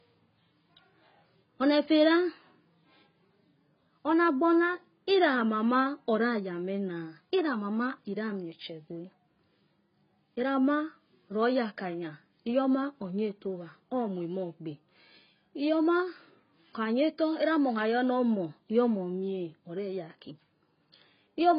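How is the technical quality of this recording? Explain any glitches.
Technical quality is poor. Throughout, the speech sounds dull and smeared with nothing above 5.1 kHz, likely from heavy AAC compression at a low bitrate, which fits roughly 16 kbps.

The band-limited, coarsely quantised spectrum leaves gaps, so sibilants turn fizzy and sustained vowels warble.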